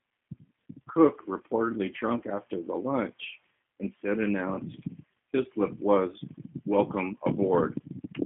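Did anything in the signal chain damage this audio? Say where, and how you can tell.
Yes: G.729 codec damage runs throughout, at the codec stage. The speech sounds slightly rough and synthetic, nothing reaches above about 3.6 kHz, and the telephone band of 150 Hz to 3.4 kHz fits an 8 kbit/s codec that rebuilds each frame from a vocal tract filter and sparse pulses.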